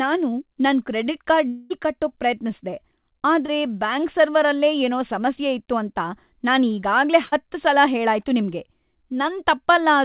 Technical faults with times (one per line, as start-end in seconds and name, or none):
1.48-1.72 long network dropout
2.70-2.74 short concealed packet loss
3.46-3.50 short concealed packet loss
7.26-7.34 burst of packet loss